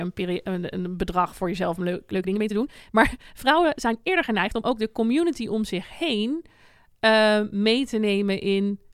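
Speech, with a time-stretched section from 2.10 s to 4.78 s, ending just before "de community om zich". Across that stretch the pace jumps to about 1.58 times normal speed while the pitch stays unchanged, so the delivery sounds rushed. This is likely software compression of that segment to fit a shorter length, using a pitch-preserving method that discards short grains of audio.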